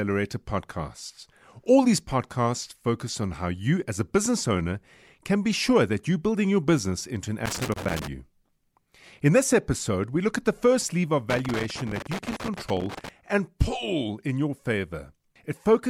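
Loose connector crackle appears from 7.46 to 8.07 s, after "your business into an", and again from 11.30 to 13.09 s, between "the first lever of" and "and pull in your": a worn contact repeatedly breaks the signal path, producing irregular scratchy crackle.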